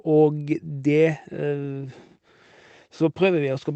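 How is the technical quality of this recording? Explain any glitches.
No glitches: the speech carries the mild coding texture and the top end capped near 8 kHz that a call codec leaves, which fits Opus at about 24 kbps on a WebRTC path.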